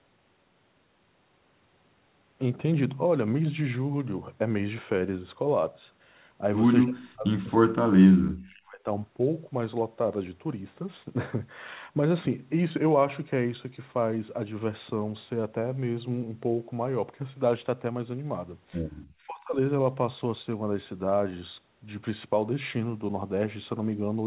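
Speech suppressed in double talk, at 6.84 to 8.86 s and again at 19.26 to 19.57 s, makes this speech clip sink, by roughly 40 dB for about two seconds in the first case and by roughly 25 dB for a brief moment in the second. The likely cause is an echo canceller that could not tell the near talker from loudspeaker echo while both sides spoke, so it turned both down. The whole recording stops at 4 kHz, consistent with a narrowband call codec.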